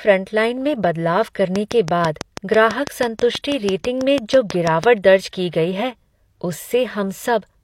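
From 1.56 s to 4.85 s, a train of clicks runs through the speech. The clicks arrive at a regular pace of about 6.1 per second, roughly twenty in all. Each has much the same shape, so they sound like a steady ticking over the talker, in the pauses too. They stand out at roughly 15 dB above the speech. The likely cause is a repeating pulse from interference, a faulty connection or a power supply.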